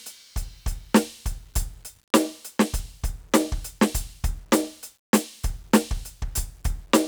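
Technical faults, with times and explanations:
Throughout: low bit depth without dither. The music has a grainy, fizzy edge that moves with the sound. It gets rougher as passages quieten, and the softest tails turn gritty. That points to the audio likely having been squeezed down to about 9 bits and simply rounded, with no dither. The rounding error then tracks the waveform and ends up roughly 40 dB below the music.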